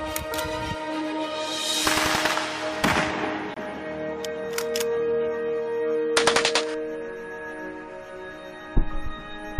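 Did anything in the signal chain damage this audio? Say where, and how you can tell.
Yes: at the codec stage, a corrupt frame was muted after the decoder rejected its damaged bits, leaving an abrupt 35 ms silent hole from 3.54 to 3.58 s, consistent with one lost frame.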